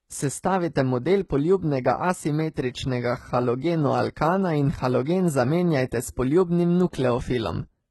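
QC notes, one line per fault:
Throughout: HE-AAC compression, likely at a low bitrate, so the treble is rebuilt from copied lower bands, leaving s sounds gritty and lispy, with nothing above 11.9 kHz.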